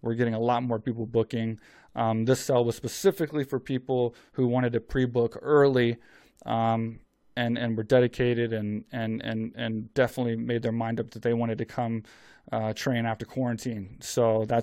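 No technical faults are audible.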